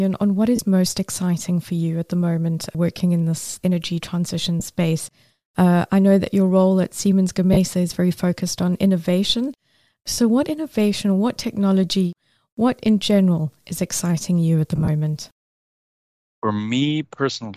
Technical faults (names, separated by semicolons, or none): lost LE Audio frames